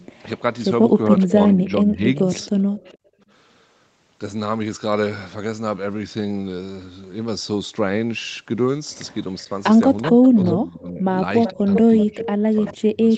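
From 0.13 to 0.2 s a very faint copy of the speech trails 421 ms behind, likely an echo leak, where a loudspeaker's sound got past the far end's echo canceller and returned. Between 1.05 and 2.31 s the speech dips by up to about 20 dB, in pieces totalling roughly 0.7 s. This is likely speech suppressed in double talk: with both sides talking, the canceller turned down the talker along with the echo. Overlapping this, from 1.19 to 2.97 s, the same 421 ms echo returns, fainter than the speech but clearer than before. From 2.63 to 3.26 s the room sound drops by up to about 25 dB for roughly 0.4 s in total, then comes back. This is background gated by the echo canceller, which clamped the microphone while the loudspeaker played. From 9.38 to 10.29 s a clearly audible echo follows the speech at 382 ms, likely a stronger echo leak. From 9.47 s to the end the speech is again pushed down, by up to about 25 dB, likely double-talk suppression. 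From 11.45 s to the end the 382 ms echo returns at a similar level.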